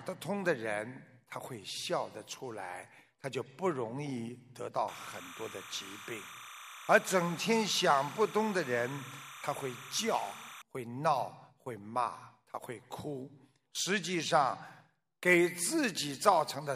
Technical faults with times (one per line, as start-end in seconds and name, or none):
4.88-10.62 timecode bleed